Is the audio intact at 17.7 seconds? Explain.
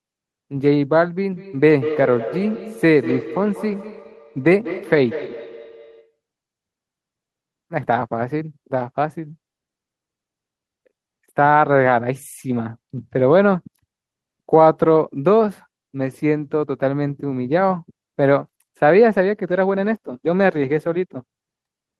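Yes, the speech at 17.7 seconds is intact, with no dropout, glitch or other audible fault at that point.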